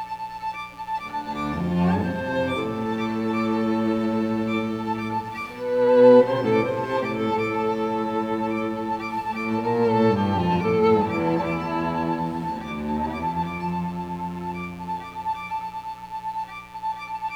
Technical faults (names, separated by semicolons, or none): mains buzz